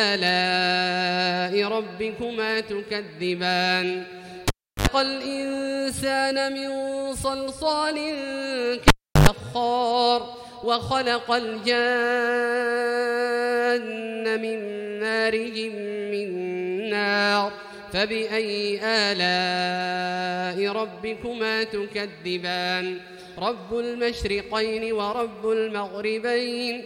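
A cable pulled and plugged in twice, at 4.48–4.87 s and 8.88–9.29 s: pops bracket roughly 350 ms near-flat waveform, then 50 Hz mains-buzz harmonic stripes from half-seated contact.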